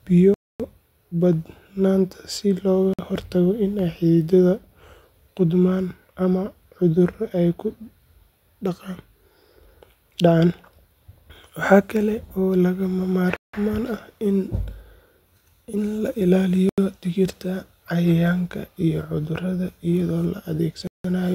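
Five times the speech drops to dead silence and returns: at 0.34 to 0.60 s (256 ms), 2.94 to 2.99 s (52 ms), 13.36 to 13.54 s (171 ms), 16.69 to 16.78 s (85 ms) and 20.87 to 21.04 s (171 ms). Each is a block of digital silence. Whole runs of samples were replaced by zeros with no fade, most likely because the output buffer was not filled in time. The last three gap lengths fit buffers of 4096 and 8192 samples at 48 kHz.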